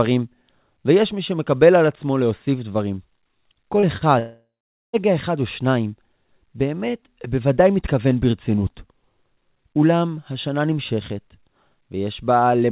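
At 3.80 s and again at 3.97 s, the speech shows short concealed packet loss. About 30 ms went missing each time. The receiver stretched the preceding sound over each gap, leaving a brief smear or wobble before real audio resumed.

From 4.19 s to 4.96 s comes a long network dropout, likely from audio failing to arrive. The last sound continues as a fading buzz, then roughly half a second of silence. Speech returns afterwards, with the missing part gone. Throughout, the narrowband call sound, with nothing above 4 kHz, fits G.711 mu-law coding.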